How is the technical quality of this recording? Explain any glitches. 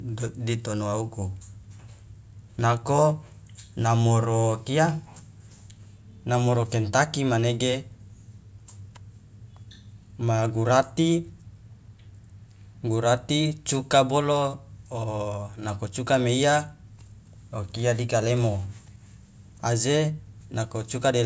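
No glitches or technical faults can be heard here.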